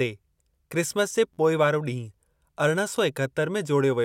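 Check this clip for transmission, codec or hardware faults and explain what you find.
Two repeated buffer faults are audible in this speech clip. Repeated buffer at 1.34 to 1.38 s, between "क्रिसमस जे" and "पोइ वारो", and again at 2.96 s: fresh audio missed its deadline, so the device replayed its last block, which fits a 512-sample buffer of about 11.6 ms. The first sounds as a brief buzzing stutter of four hard-joined extra repeats, the second as a single click. Little or no audio appears to be lost.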